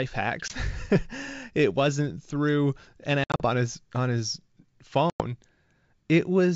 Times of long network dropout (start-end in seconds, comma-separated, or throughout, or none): none